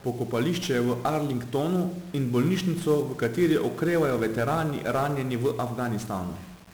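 From start to finish, the speech has been passed through 1-bit DFPWM compression, heavily damaged. The encoder keeps only one bit per sample, and each bit just nudges an adaptive level up or down, so the waveform is traced as a staircase that keeps overshooting, a coarseness that fits a stream near 48 kbps. That error becomes dense broadband noise riding on everything: the voice sounds fuzzy and crackly, with its upper frequencies smothered in hiss.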